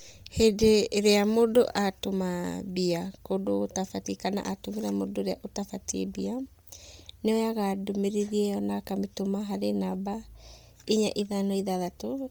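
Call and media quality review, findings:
Mains hum, whole clip. Steady 60 Hz tone with a few low harmonics under the speech, roughly 35 dB down, so it's most obvious in the gaps. Probable component: capture chain grounding. A ground loop or nearby transformer is leaking the power line into the signal. Worth checking cabling and the interface's ground first.

Bluetooth LC3 compression, likely, whole clip. Heavy codec damage. Speech has a breathy, grainy edge, and the highs sound noise-filled rather than clean, with nothing above 20.3 kHz. Probable component: the wireless link. The encoder is dropping much of the upper spectrum and patching it with noise, which fits a low bitrate around 32 kbps and 10 ms frames.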